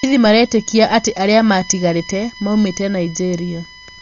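Speech runs under a steady USB whine from start to finish: a fixed tone at 1 kHz, loudest at its 2 kHz harmonic, roughly 20 dB below the speech, drawn as unbroken horizontal lines on a spectrogram. The speech is also dull and rough, with fluttering noise around voiced tones and nothing above 6.9 kHz, which a spectrogram shows as a hard ceiling. This is likely heavy Dolby Digital compression at a very low bitrate, around 40 kbps.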